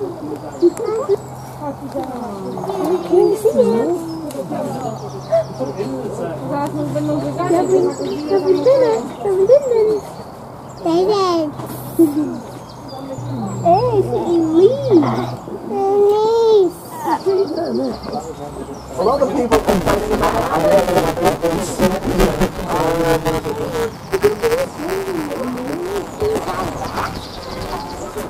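Writer and hardware pointers in the ring buffer have slipped, causing buffer tearing from 19.52 s to the end: most of each buffer replays audio about 10 ms old, producing a 172 Hz robotic buzz that fits a 256-sample buffer.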